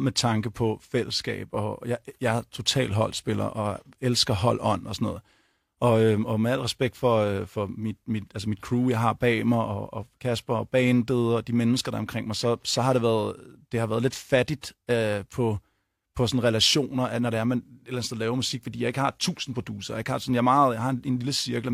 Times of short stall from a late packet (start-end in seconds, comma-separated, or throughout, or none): none